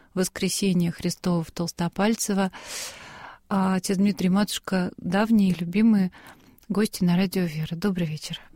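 Nothing in the audio stood out as a technical problem on listening.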